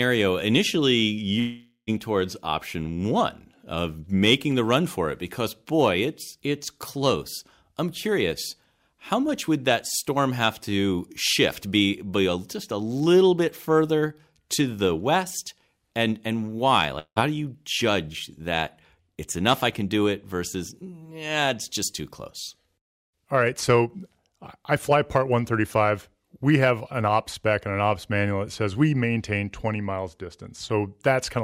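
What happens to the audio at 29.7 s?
Nothing goes wrong at 29.7 s; the audio plays through that moment intact, with no dropout, click or other fault.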